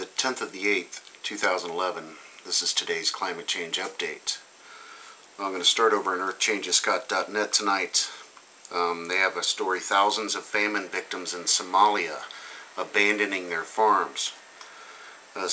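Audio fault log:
Nothing stood out on listening through this recording.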